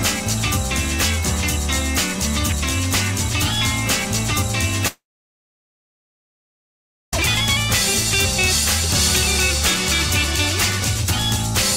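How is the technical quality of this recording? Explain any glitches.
One glitch stands out: a gap of a little over two seconds near the middle.

Long network dropout, 4.87 to 7.13 s: the audio breaks off, a brief fading buzz carries the last sound forward, then about 2.1 s of silence follows before playback resumes with that stretch missing. This is likely a network stall in which no audio data arrived and the receiver ran out of material to fill the gap.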